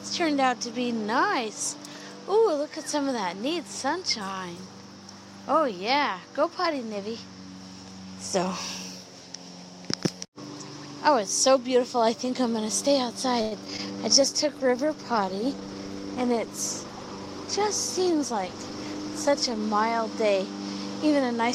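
From 13.41 s to 13.80 s there is a burst of repeated packet loss, giving a choppy, robotic sound. Four separate holes open in the stream within under 0.4 s. The receiver covers each one by extending the last stretch of sound, which adds about 114 ms of synthetic fill. About 60 ms is simply missing, and the longest gap runs about 101 ms. Roughly 30 percent of this span is concealment, so the audio turns choppy and broken.

Overlapping the tail of that burst, from 13.70 s to 14.02 s, comes a jitter buffer slow-down. With its reserve running low, the receiver rebuilds it by repeating single pitch periods and small slices of quieter material over and over. About 51 ms is added, so playback runs at about 87 percent speed with the pitch unchanged. Sounds in this window come out drawn-out and slightly sluggish.

At 14.22 s a call bitrate drop sets in and lasts until 19.67 s, about 5.5 s in total. 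The bandwidth estimate collapsed and the encoder was forced into far coarser coding. The change in quality fits a fall from around 128 kbps to about 18 kbps. At that rate the upper frequencies are cut away and the remaining detail is quantised roughly, so the audio sounds muffled and watery throughout the stretch.

Inside that low-bitrate stretch, from 15.46 s to 16.17 s, a jitter buffer speed-up occurs. The buffer was holding more than its target delay. The receiver then trimmed short pieces of one or a few pitch periods repeatedly, removing around a tenth of a second. Playback runs at about 114 percent speed at unchanged pitch, so this part sounds hurried.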